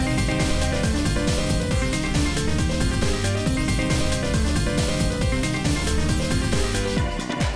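Nothing technically wrong turns up anywhere in this one, so there's no problem to point to and nothing to explain.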